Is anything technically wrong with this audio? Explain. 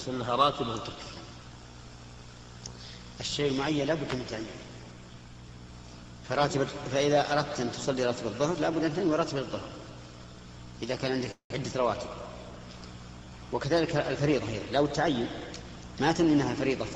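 Yes, there are two faults.

From 11.31 to 11.52 s there is a call audio freeze. The sound stops and is replaced by a fading fill that ends in about 100 ms of silence. The likely cause is late packets draining the jitter buffer. Nothing is lost; the audio resumes where it stopped, about 188 ms later.

From 14.18 to 15.84 s there is a jitter buffer speed-up. The sound runs at 112% speed with unchanged pitch, so it feels hurried. The receiver is cutting tiny pitch-period slices to shrink an overfull buffer, removing about a fifth of a second in total.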